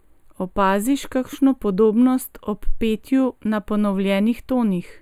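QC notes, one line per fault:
Throughout: channel delay (comb filtering). One channel arrives about a tenth of a millisecond late, which fits an offset of just a few samples. When the channels are summed to mono, the speech cancels at evenly spaced frequencies, starting around 5 kHz and recurring near 15 kHz. This gives a hollow, phasey dullness. Unlike a plain treble roll-off or EQ dip, the notches stay fixed and repeat at regular intervals, with energy returning between them.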